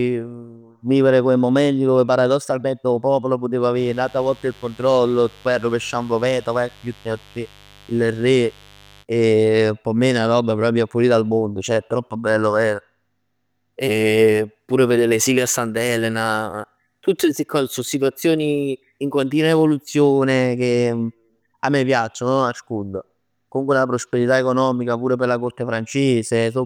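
From 3.73 to 9.05 s, after "paradossalmente 'o popolo putev", a raspy 50 Hz mains buzz sits about 30 dB below the speech. Its spiky harmonics make it rasp, unlike a smooth hum.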